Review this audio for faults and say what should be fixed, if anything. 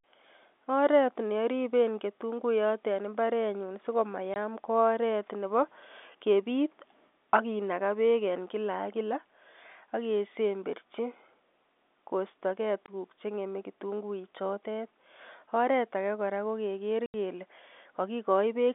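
Packet loss filled with silence cuts three holes in the speech. They fall at 4.34–4.36 s, just after "ketunguiyot en imbarenyun so"; at 12.86–12.88 s, just before "che ngeme kitunguichotet"; and at 17.06–17.14 s, just after "age kora ko keker". Lost packets were replaced by silence. Each hole has hard edges. The 20 ms gaps fit single 20 ms packets. The 80 ms gap fits four in a row.

To prevent this, reduce network loss and use packet loss concealment at the receiver instead of silence.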